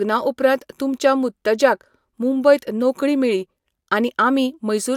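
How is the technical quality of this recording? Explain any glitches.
The technical quality of the recording holds up with no glitches to explain.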